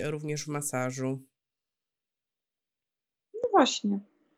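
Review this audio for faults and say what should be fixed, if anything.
Nothing stood out on listening to this speech recording, so there is nothing here that needs fixing.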